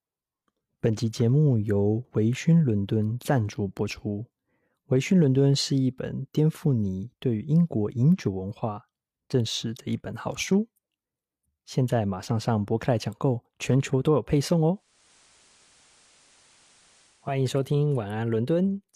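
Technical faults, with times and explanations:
14.72–17.44 s digital radio blending to analogue: faint hiss appears and level dips about 2 dB as the receiver cross-fades to FM over 435 ms.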